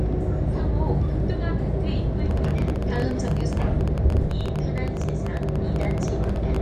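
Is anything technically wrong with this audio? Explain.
Yes. From 2.31 s to 6.57 s there is a train of clicks: around fifty short pulses, averaging about 13.4 per second but unevenly spaced. Each click has much the same shape and rises a few decibels above the underlying sound. They are heard as an erratic ticking laid over the audio, including its quieter moments. The likely cause is a faulty connection or power supply, or interference from nearby equipment. A spectrogram shows thin broadband vertical lines, and the waveform shows narrow spikes.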